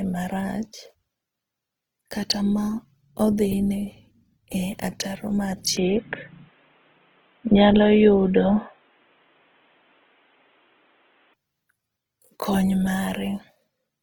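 The clip is speech, and throughout it carries Opus compression, likely at around 16 kbps in CELT music mode. The band stays full, reaching 20.2 kHz, but the damage is plainly audible as a rough, grainy texture rather than the swirling, hollow gaps MP3 leaves. From 5.77 to 11.34 s the input is switched to a poorer device, likely another microphone or a headset. The sound turns dull with nothing above 3.8 kHz, the level shifts by around 5 dB, and a new noise floor appears about 40 dB down. The change has no gap at the switch and reverses abruptly, unlike a codec narrowing its bandwidth.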